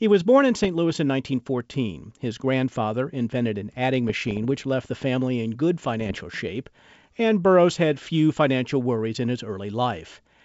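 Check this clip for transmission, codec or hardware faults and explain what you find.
There's one fault type here, bit errors on an ADPCM link, showing up three times in this speech clip. The wideband G.722 sound comes through clean apart from these hits. The first is brief, from 0.64 to 0.68 s, right after "was born in". The second is the longest, from 4.09 to 4.46 s, between "grandfather invented an adding" and "which left the family". The third runs from 6.01 to 6.21 s, between "the family in good" and "shape and". Each corrupted bit (only a few per thousand here) throws off the decoder's step size and predictor, so the damage rings on past the error itself. You hear pops and rough, gritty bursts with quick jumps in level.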